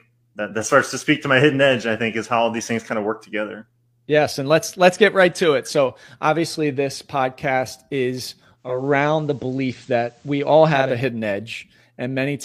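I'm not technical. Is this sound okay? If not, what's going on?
No. There is a digital radio blending to analogue fault. Just after "obviously this podcast is", at 8.56 seconds, the radio lost its digital signal. It faded over to the FM version of the same station in about a third of a second. Until 11.01 seconds a faint hiss sits underneath. The loudness stays the same. Then it blends back to the clearer digital sound.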